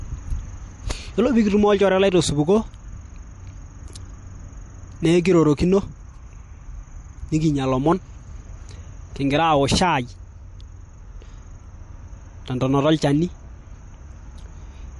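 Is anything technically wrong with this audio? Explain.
Yes. Throughout, the speech likely went through low-bitrate MP3 compression, around 48 kbps; short on bits, the encoder dropped everything above 11.3 kHz and toggled weak frequency lines, leaving plainly audible watery swirl, metallic s sounds and smeared attacks.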